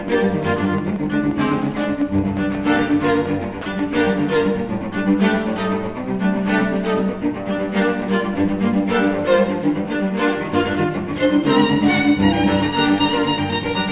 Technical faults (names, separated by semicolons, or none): train of clicks; sound dropped by the voice detector